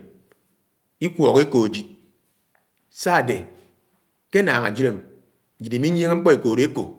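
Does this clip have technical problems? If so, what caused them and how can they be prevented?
No, no technical faults present.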